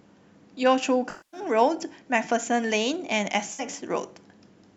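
At 1.10 to 1.40 s, AAC frame loss with concealment replaces about 235 ms with recycled spectrum. At 3.52 to 3.61 s, a shorter 64 ms gap sounds smeared and phasey.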